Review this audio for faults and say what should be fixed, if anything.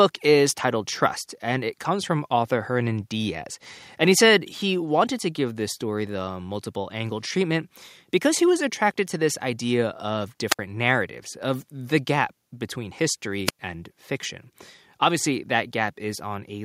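At 4.41 s the speech and the background behind it drop together by about 2 dB in a single step. The level doesn't recover, so everything after that point sits slightly quieter. This is a microphone volume stepped down, likely because the call software judged the input too hot and lowered the device's input volume in one move. To prevent it, set the input level conservatively beforehand and turn off automatic microphone adjustment in the call software.

Between 10.50 and 10.59 s, and again between 13.46 and 13.59 s, a short burst of hiss rises and then the audio falls into near silence. The holes last about 64 ms and about 104 ms before the speech returns. These are wireless microphone squelch dropouts. The analogue FM signal faded far enough that the receiver's squelch muted its output until the signal recovered. To prevent them, keep a clear line of sight and short distance between transmitter and receiver, and check antenna placement and battery level.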